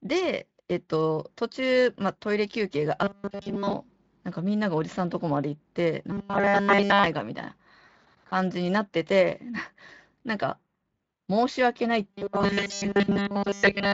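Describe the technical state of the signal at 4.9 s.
At 4.9 s the speech is intact, with no fault, only the light, ordinary coding of the Speex path it passes through.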